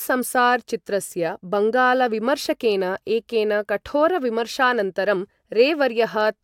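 No technical faults are audible.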